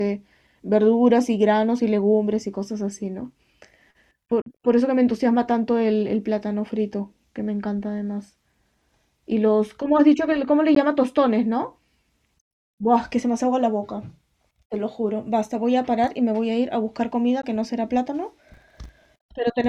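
Bluetooth dropouts, most likely, cut the speech at 4.42 to 4.46 s, at 10.75 s and at 17.42 s. Each is a short hole of silence: about 44 ms at the first, which fits roughly three lost packets, and about 15 ms at the other two, consistent with a single packet. The wireless link failed to deliver audio to the headphones in time, so playback went quiet and then resumed further along, as though the speech had continued underneath.

Processor overload crackle runs from 18.51 to 19.05 s as a gritty, tearing crackle laid over the speech. The processor repeatedly missed its deadlines for small buffers of roughly 10 ms, around twenty of them. Each time, a slice of old audio was replayed in place of the new, and the hard edges of those stale fragments pile up into the crackle until the load eases.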